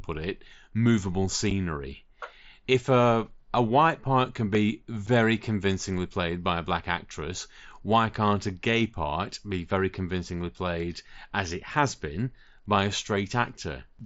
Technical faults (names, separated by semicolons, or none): unconcealed Bluetooth headset packet loss